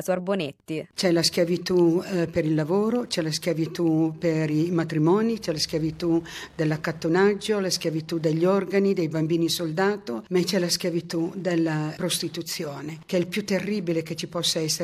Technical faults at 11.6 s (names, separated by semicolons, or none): Wi-Fi interference